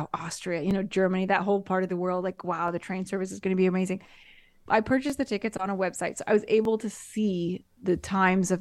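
At 0.71 s, 2.68 s (between "the world like wow" and "the train service is"), 5.10 s (just before "the tickets on a") and 6.65 s (between "website so I was" and "to see"), the speech has a repeated buffer. Each time the output device ran short of new audio and replayed its last block once. That block is about 12 ms long, which fits a 512-sample buffer. The duplicate is heard as a brief click or buzz at a hard join, and no speech appears to be lost.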